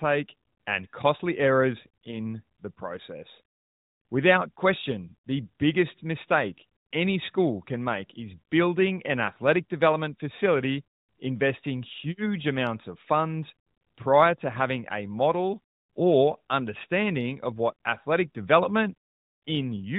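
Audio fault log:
No faults heard anywhere in this speech recording.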